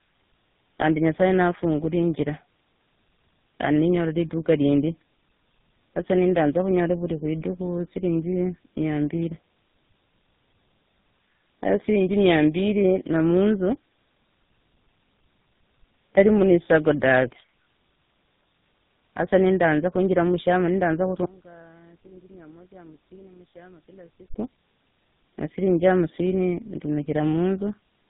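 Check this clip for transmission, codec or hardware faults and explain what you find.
Two faults are present: cascaded codec damage throughout, and a brief collapse in level.

Tandem speech coding, throughout: the sound points to about three speech codecs in a row, ending in something like GSM full rate. Each coder re-encodes the previous coder's errors, leaving speech rough, muffled and warbly, with nothing above 3.8 kHz.

One channel inverted, 21.26 to 24.34 s: level drops by about 26 dB and the speech turns faint. The likely cause is one stereo channel with reversed polarity, so the shared centre content cancels when the channels are summed to mono.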